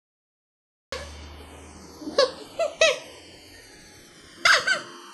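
A cut-off start at 0.92 s: the clip holds digital silence until 0.92 s, then the sound begins abruptly mid-event with no attack or fade, as if recording or streaming began late and caught the sound already underway. Channels drifting apart run throughout: the two sides slide out of alignment, which suggests two devices on separate clocks differing by something like 150 parts per million. The inter-channel delay grows to about 0.7 ms by the end, so a mono fold-down gives slowly sweeping comb notches heard as slow flanging.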